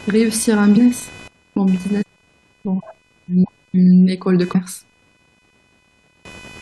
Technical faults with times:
0.00-6.61 computer activity noise
0.76 compressed frames skipped
2.01-2.03 compressed frames skipped
4.54 compressed frames skipped
6.14 compressed frames skipped

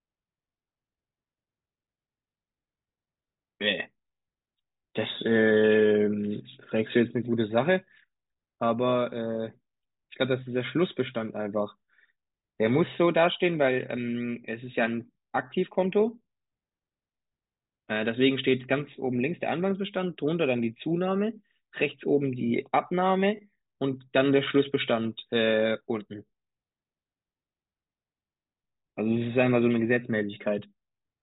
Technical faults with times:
none

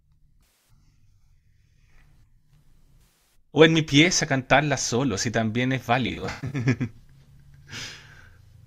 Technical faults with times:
0.44-0.70 AAC frame loss with concealment
3.02-3.35 AAC frame loss with concealment
6.07-6.61 AAC frame loss with concealment

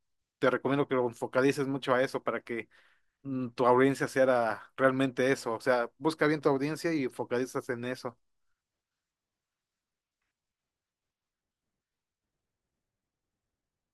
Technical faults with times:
none

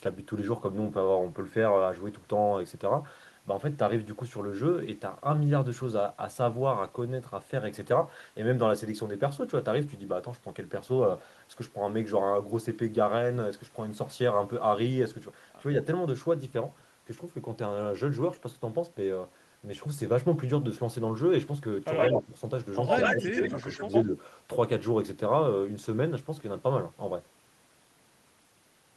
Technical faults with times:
21.97-22.22 echo leak
22.14-22.33 speech suppressed in double talk
22.87-24.04 echo leak
23.13-23.19 speech suppressed in double talk
23.51-23.65 speech suppressed in double talk
24.05-24.11 speech suppressed in double talk

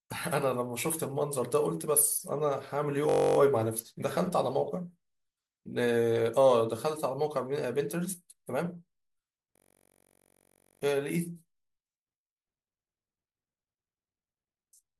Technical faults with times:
3.09-3.37 system hang loop
9.56-10.82 system hang loop

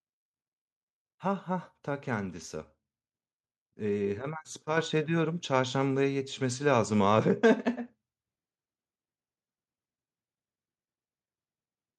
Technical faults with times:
4.77 microphone volume stepped up

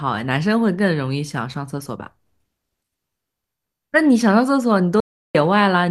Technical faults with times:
5.00-5.35 audio dropout to silence

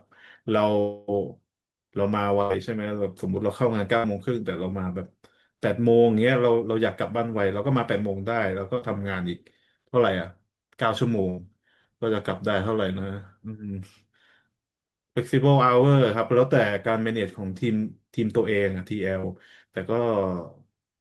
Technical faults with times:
0.79-1.10 long network dropout
2.42-2.52 burst of packet loss
3.98-4.06 burst of packet loss
8.78-8.83 short concealed packet loss
11.29-11.40 burst of packet loss
19.20-19.25 short concealed packet loss

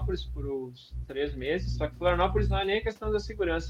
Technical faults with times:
none

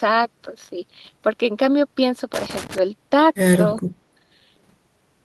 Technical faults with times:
2.34-2.78 loose connector crackle

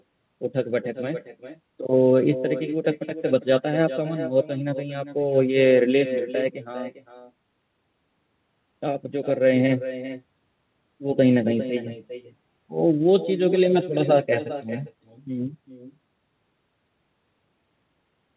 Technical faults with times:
0.00-18.36 echo with no canceller

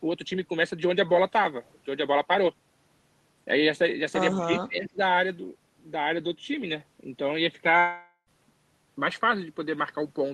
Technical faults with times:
4.45-4.99 speech suppressed in double talk
7.79-8.29 long network dropout

